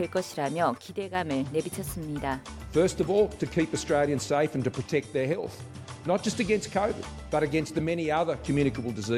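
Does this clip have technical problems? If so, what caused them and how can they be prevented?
Yes. The sound drops by about 6 dB at 0.78–1.15 s and 5.33–5.43 s, likely one channel dropping out before the mono sum. Secure the cables and connectors on both channels and monitor each one separately while recording.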